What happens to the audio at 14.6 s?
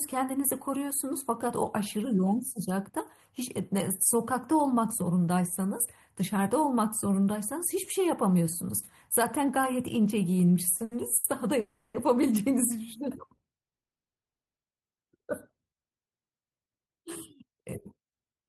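At 14.59 s the sound resumes after a call audio freeze that began at 13.62 s: nearly a second of silence, then the audio carries on where it stopped with nothing lost. Likely cause: delayed packets emptied the jitter buffer, inserting a 950 ms gap.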